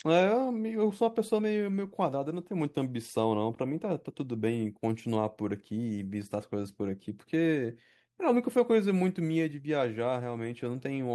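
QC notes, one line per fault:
Nothing to flag on this speech clip, so there's no fault line to log.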